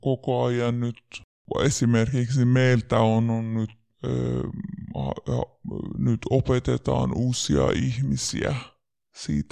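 From start to finish the speech plays back slow and low. This is a wrong sample rate fault. The audio appears to have been recorded at 44.1 kHz and played at 32 kHz, with no conversion between them. Every sample lasts longer than it should. Speed drops to about 0.73 of normal. Pitch falls by about 5.5 semitones at the same time. The voice sounds deep, heavy and drawn out.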